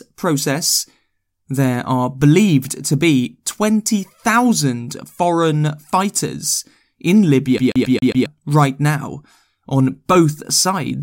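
From 7.58 s to 8.26 s the speech is caught in a CD stuck on one turn: the laser jumps back to the same point each revolution, so a 135 ms slice plays five times with brief mutes at each skip, before resuming on "right now on both".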